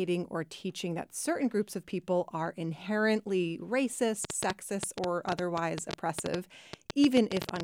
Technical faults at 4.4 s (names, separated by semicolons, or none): train of clicks